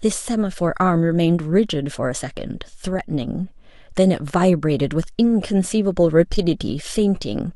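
A speech recording with nothing technically wrong in it.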